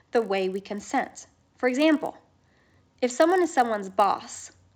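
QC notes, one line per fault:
Throughout: resampler restarted on every block. The rate conversion, which fits 16 kHz up to 48 kHz, was run on each 20 ms block separately. At every block edge the converter lacked the true neighbouring samples and filled in the wrong ones. Each edge carries a small error. These errors repeat 50 times a second, so they merge into a 50 Hz buzz riding on the speech. It follows the signal and drops away when the speech stops.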